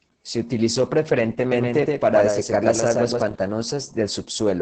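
Opus voice compression runs through the whole speech clip. The coder models each short stretch of the signal with a linear-prediction filter and quantises the excitation very coarsely, so the speech is muffled, hoarse and slightly robotic. The damage is heavy, which points to a bitrate around 10 kbps in SILK's wideband mode. On a spectrogram, energy stops sharply at about 8.6 kHz, and harmonics look smeared and blocky, frame by frame.

From 1.52 s to 3.22 s, a doubled audio track appears: a second full-band copy of the speech trails the first by roughly 150 ms, a few decibels quieter. The likely cause is the same audio being captured again by a slower path. There is no room colour or decay, just a flat, stuttering echo, and it begins and ends abruptly. The waveform shows each burst repeated at a fixed offset, and the spectrogram shows the same patterns shifted and overlaid.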